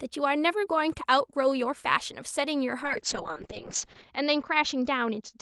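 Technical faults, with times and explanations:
2.84–5.42 s, call bitrate drop: from 2.84 s to the end of the clip the speech turns rough and watery, and its top end narrows from 12 kHz to 8 kHz. This fits the Opus call encoder being pushed from about 32 kbps down to 6 kbps after the bandwidth estimate collapsed. It codes each frame far more coarsely and discards the upper band. The harshest stretch lasts about 1.2 s, and the bitrate does not recover before the audio ends.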